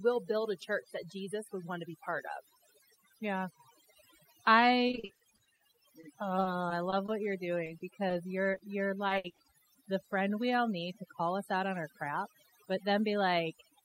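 Overdone noise removal runs through the whole speech clip: the noise suppressor was set so aggressively that frequency bands near its noise estimate are pulled almost to silence, taking quiet parts of the voice with them, so the background becomes near-silent with twinkling specks. Repeated packet loss (robotic sound) hits from 4.87 to 9.46 s, just before "the friend we all": frequent short dropouts, the longest about 60 ms, are each patched by stretching the preceding sound, so about 13% of that stretch is concealed filler, giving a choppy quality with pieces of the speech missing.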